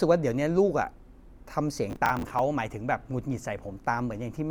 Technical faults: processor overload crackle

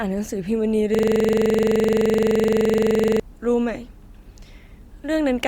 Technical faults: system hang loop

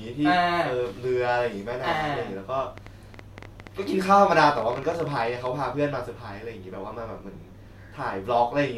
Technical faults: train of clicks

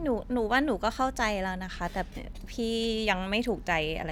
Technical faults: none

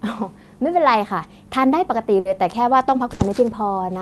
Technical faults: burst of packet loss

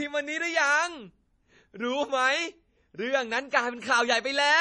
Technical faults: MP3 compression

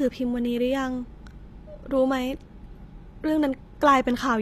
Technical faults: HE-AAC compression

